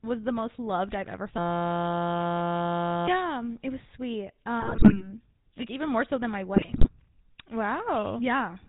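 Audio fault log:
throughout GSM full-rate codec. The whole clip has passed through the original GSM speech coder at 13 kbps. The coder models the vocal tract and drives it with a thinned, pulse-like excitation, so the voice takes on a buzzy, gravelly roughness. Nothing above 4 kHz survives, so sibilants and breath sound dull and boxy. The damage is plainly audible. It is worst where the voice rises in pitch.
1.38 to 3.08 s system hang loop. Here the audio freezes into a steady buzz. One 5.8 ms scrap of sound repeats exactly, about 172 times a second, for roughly 1.7 s. That length fits a 256-sample buffer that the sound hardware kept replaying while the computer or driver stalled. Because the loop is so short, it fuses into a tone at the loop rate instead of a stutter. About a second and a half of the real audio is lost behind it.
4.60 to 5.08 s and 6.54 to 6.90 s GSM bit errors. In these two bursts the voice breaks into squawks, pops and gargling. 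Corrupted bits reached the decoder, which points to a weak link with an error rate of a few percent, somewhat heavier in the second burst. Damaged filter, pitch and gain values bend the spectrum and make the level jump from frame to frame, so each burst sounds like a string of short, harsh blurts.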